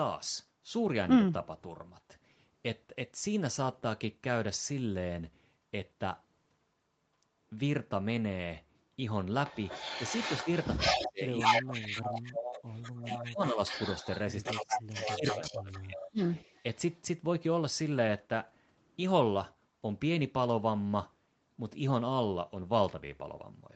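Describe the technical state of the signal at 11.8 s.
An echo canceller likely failed to remove loudspeaker pickup between 9.47 and 16.99 s, so an echo leak adds a copy of the speech delayed by about 188 ms, about 5 dB quieter than the direct speech. In the same moment, double talk likely confused the canceller between 10.86 and 12.39 s, suppressing the talker's speech in dips reaching around 20 dB at the deepest.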